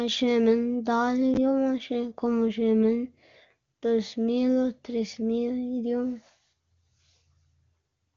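No technical faults are audible.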